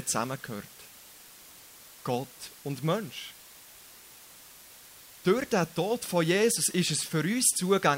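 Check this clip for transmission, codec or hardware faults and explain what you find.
One fault is present, lasting the whole clip: low bit depth with dither. The speech appears to be stored with about 7 bits, and dither noise is added before each sample is rounded, so the rounding error becomes steady white noise instead of distortion. The result is a constant, even hiss roughly 20 dB below the speech. Without dither, the same bit depth would cause gritty distortion that follows the speech and drops out in pauses. Here the hiss stays level through gaps and loud syllables alike.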